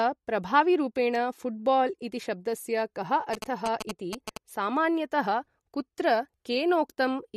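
Throughout the recording the speech carries plainly audible damage, likely from MP3 compression. Nothing is present above 14 kHz, where the encoder has cut the treble at a fixed frequency, and the amount of damage points to a low bitrate of around 48 kbps. Weak frequency lines drop in and out between frames, giving a watery, swirling quality, with metallic chirps on s sounds and softened consonant attacks.

From 3.34 s to 4.37 s, GSM signalling bursts break in as a galloping dit-dit-dit of short buzzes repeating at 217 Hz. A nearby 2G phone is exchanging signalling bursts with the network, and the audio circuitry rectifies that radio energy into the signal path. The interference sits only a few decibels below the speech for the full second it lasts.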